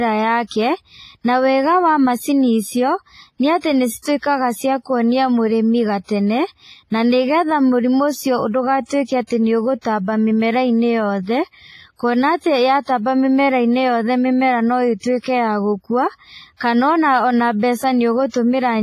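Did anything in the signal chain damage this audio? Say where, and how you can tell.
Yes. The damage happened at the codec stage. Throughout the speech there is heavy transform-codec damage, and it is most likely WMA compression. Nothing is present above 15.3 kHz. Weak spectral detail has been stripped out, which leaves a ringing, washy texture and a hiss that rises and falls with the speech. Damage this severe fits a low bitrate of around 24 kbps, where long transform blocks smear quantisation noise over tens of milliseconds.

That same codec produces pre-echo at 4.02 s, 9.27 s, 9.81 s, 15.00 s and 18.29 s. At each point, a sharp onset landed late in a transform block. The noise budget set for the loud attack was spread across the whole block, so it filled the quiet gap just before the attack. The result is a brief hiss of about 30 to 45 ms ahead of each onset, and the attack itself sounds soft and smeared.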